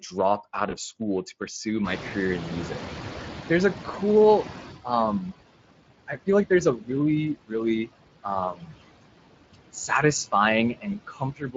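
Throughout the clip, the background sinks between phrases and swells under them. These are noise suppressor artifacts: the suppressor pulls down any band it judges to be steady noise by about 20 dB, frame by frame.

Over the same stretch, the speech has a hoarse, grainy texture. This is the Speex codec at a bitrate near 20 kbps. With limited bits for the excitation, the codec roughens the voice.

At 0.69 s, the sound briefly smears into a short tone or coloured noise that fades, and the voice stays weak for a few tens of milliseconds. This is VoIP packet loss concealed by the speech codec. About 20 ms of audio went missing, and the decoder extrapolated from its last pitch and filter while lowering the gain.

From about 2 s, the room noise jumps by about 22 dB. Between 1.84 and 4.77 s it comes through louder than it should before gradually sinking. This is the noise suppressor catching up: its noise estimate took almost 3 seconds to adapt to the new level, eventually cutting it by about 15 dB.

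Inside that stretch, at 3.91 s, there is a second brief smear with a weakened recovery. Again, about 20 ms was lost and covered by the codec's concealment.

Later, parts of the speech turn faint and swallowed: 6.07 to 6.28 s, 6.76 to 6.90 s, 8.52 to 8.74 s, and from 10.74 s to the end, dropping by about 14 to 16 dB. This is speech cut by the noise suppressor, which mistook parts of the speech for background noise. The last passage loses roughly half a second of sound.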